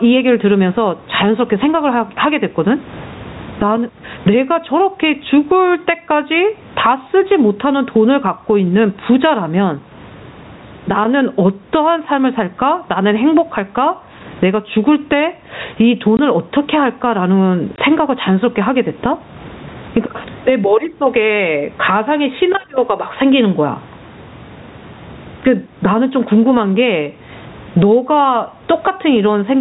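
Gain pumping runs through the whole clip. The level swing is roughly 20 dB. Loud and quiet syllables sit unnaturally close together, so the speech sounds squashed. The likely cause is microphone gain set far too high, with a fast limiter or compressor pulling it down on each loud sound.

Packet loss filled with silence cuts the speech twice, from 16.17 to 16.19 s and from 17.76 to 17.78 s. Each hole lasts 20 ms, which fits two lost 10 ms packets. The receiver had nothing to play there, so it inserted pure silence. The sound stops dead, with hard edges on each side. The two dropouts sit close together.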